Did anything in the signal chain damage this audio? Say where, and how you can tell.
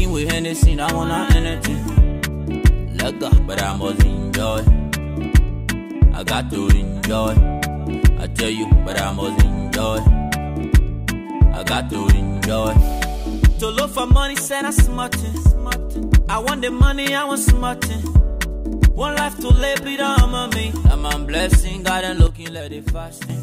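Yes. A sudden gain jump runs from 22.27 s to 23.30 s, where the level drops by about 9 dB in a single step with no fade, then returns. The sound and its background noise fall together by the same amount, which points to a gain change applied to the whole digital signal rather than anything in the source. It was likely caused by a digital gain setting or bit shift switched in without a ramp, somewhere in the processing stage.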